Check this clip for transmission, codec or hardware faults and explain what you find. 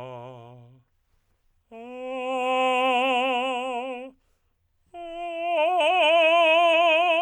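No faults found in this music.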